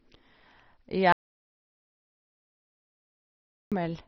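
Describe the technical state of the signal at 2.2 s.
At 2.2 s the signal is in an audio dropout to silence, running from 1.12 s to 3.72 s, so about 2.59 s of speech is missing. The most likely cause is that the input was lost while the recorder kept writing silence. What distinguishes this from a noise gate or a low-level pause is that the gap is silent, with no room tone or hiss at all, and it starts and ends abruptly rather than fading.

The surrounding audio also carries MP2 compression, which can be heard at either edge of the gap. The codec's 32 sub-bands have been starved of bits, so the upper bands are switched off entirely, with nothing above 6.1 kHz. The bands that remain are coarsely quantised, giving a dull, gurgling, granular texture. This fits a very low bitrate of around 32 kbps. Unlike MP3 artefacts, the damage here comes from whole bands flickering on and off rather than from smeared, swirly pre-echo.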